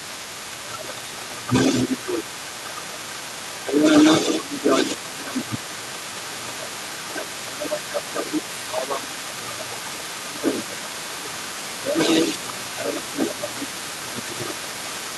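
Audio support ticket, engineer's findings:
Speech suppressed in double talk, 0.0–2.51 s: talker dips by about 10 dB, roughly 2 s affected in total. At 3.62–3.85 s, a brief dip of similar depth. At 4.41–14.57 s, dips, around 7 s of it pulled down. Likely the echo canceller's suppressor: it cannot tell near talker from loudspeaker echo while both sides speak, so it attenuates everything.

Other side's voice leaking through, whole clip: a second voice audible underneath, about 10 dB below the talker. Likely residual echo. The far side plays on the talker's loudspeaker, reaches the mic, and the echo canceller's adaptive filter fails to subtract all of it before sending.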